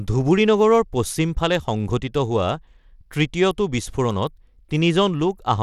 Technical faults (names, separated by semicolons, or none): Bluetooth SBC compression